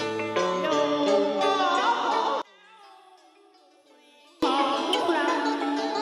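From 2.42 to 4.43 s the level drops by about 31 dB to a faint residue, then returns. The likely cause is one channel inverted, so shared content cancels in a mono sum. The waveform shrinks abruptly, and the whole spectrogram fades.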